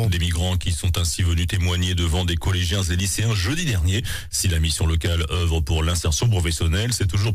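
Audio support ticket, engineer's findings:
No faults found on listening; no action required.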